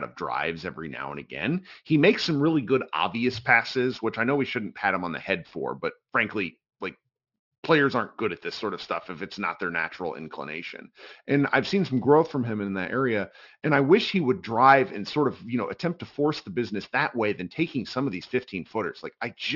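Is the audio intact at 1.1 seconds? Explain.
No. Across the whole clip, including 1.1 s, the speech was resampled down without an anti-alias filter, which fits a drop to a 12 kHz rate. Energy above 6 kHz folds back as false, unrelated tones roughly 20 dB below the speech, making sibilants gritty and metallic. This is aliasing.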